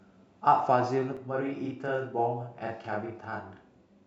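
From 1.17 s to the end, the speech takes on a doubled, slapback quality, a second equal-level copy trailing each sound. This is channel delay (doubling): one channel runs 40 ms late, and summing to mono lets that late copy stand apart.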